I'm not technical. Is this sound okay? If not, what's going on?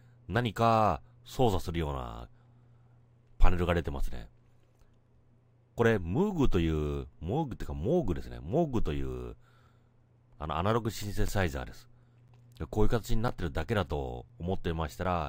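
No. Periodic USB or driver dropouts from 11.28 to 14.29 s: once a second, a background task stalls playback, leaving a tiny gap of silence heard as a tick.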